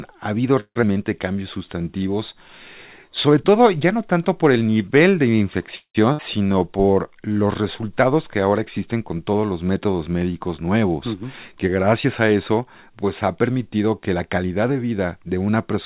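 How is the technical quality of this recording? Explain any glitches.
The recording is narrowband, with nothing above 4 kHz, consistent with G.711 telephone-band coding over a WebRTC call path. It contains six jitter-buffer and network faults within its 15.9 seconds.

Long network dropout, 0.60 to 0.84 s: The signal breaks up, and the last sound is stretched into a decaying buzz lasting about 223 ms. Roughly 70 ms of that is silence. When audio resumes, about 120 ms of speech is gone. The likely cause is a run of packets that never arrived, forcing the receiver to conceal the gap and then resume later in the stream with slightly more delay.

Jitter buffer slow-down, 1.33 to 2.04 s and 6.47 to 7.34 s: Speech drags while keeping its pitch, running at about 86% and 88% of normal speed. The receiver repeated individual pitch periods and slices of pauses to rebuild its reserve, adding about 111 ms and 113 ms respectively. 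Sounds are drawn out.

Call audio freeze, 5.76 to 5.97 s: Playback stalls, with a fading buzz that drops to silence for about 100 ms of its 190 ms length. Speech then continues exactly where it stopped, so nothing is lost, but the clip is stretched by 190 ms. The likely cause is delayed packets that emptied the jitter buffer until they arrived late.

Skip ahead, 6.13 to 6.20 s: After a brief 60 ms fill, playback jumps forward. Roughly 0.2 s of speech is dropped, and the two sides are spliced almost directly. This trimmed the accumulated delay by about a tenth of a second, consistent with the buffer discarding audio that had already been overtaken.

Jitter buffer speed-up, 11.13 to 15.17 s: Over four seconds, the speech runs at about 108% speed with unchanged pitch and sounds hurried. The buffer held more audio than its target, so it cut short pitch-period fragments repeatedly, removing roughly 0.3 s in total to bring latency back down.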